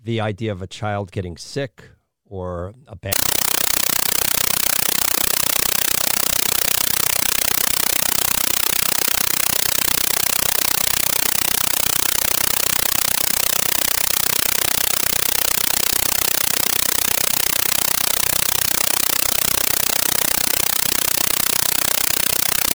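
From 3.13 s to the end, the speech gives way to a compressed stream played as audio: an AC-3 (Dolby Digital) bitstream reached the output undecoded and was treated as ordinary samples. Each coded frame comes out as a burst of about 8 ms of dense noise followed by silent padding, repeating 31.25 times a second. This is heard as very loud, harsh, chattering static with a rapid buzz-like pulse. The burst density fits a 384 kbps stream.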